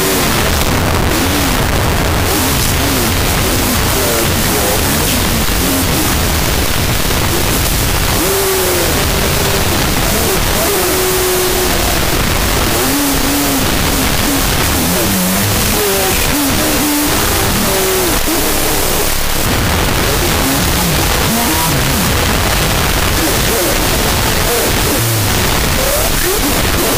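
Throughout, the audio suffers from a wrong sample width: data written as 16-bit integers are being read as unsigned 8-bit values. Each original sample splits into two, so the clip runs at half speed, dropping the pitch by an octave. Alternate values come from the low bytes and turn into loud, hissing noise. The high bytes carry a coarse, distorted trace of the real signal, which stays buried and sluggish beneath that noise from start to finish.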